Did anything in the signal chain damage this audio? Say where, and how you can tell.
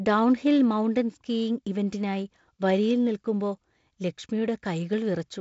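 No, nothing stood out on listening, and the speech carries the light upper-band hiss and top end near 7.7 kHz expected of G.722 wideband telephone coding.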